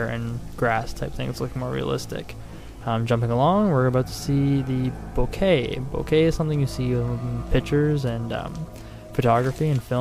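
Right near the start, from about 0.81 to 0.83 s, there's a quick chirpy blip where a corrupt frame got decoded. A single compressed frame picked up flipped bits, and the decoder played it anyway, so misread codes and gains threw energy into frequencies where it doesn't belong for just that frame's length. It's short and not huge, peaking somewhere around -30 dBFS.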